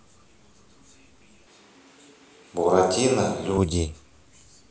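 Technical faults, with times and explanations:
1.47 to 3.58 s, switch to a distant microphone: the speech abruptly turns roomy and hollow with thinner bass at much the same level, likely because the close microphone dropped out. A spectrogram shows weaker lows and reverberant smearing between two sharp edges.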